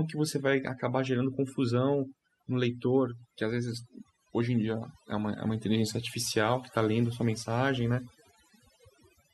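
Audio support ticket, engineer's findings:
Overdone noise removal, throughout the clip. Background drops, with twinkling specks where residual noise bins flicker on and off. Component: noise reduction stage, set too strong for the noisy source. Mechanism: bands falling near the noise estimate are cut hard or gated off, and quiet speech detail in those bands goes with them. Fix: lower the reduction depth or raise the threshold.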